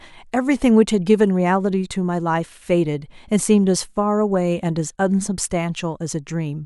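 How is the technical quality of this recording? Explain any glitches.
Nothing here needs explaining, as the recording runs without any glitches worth pointing out.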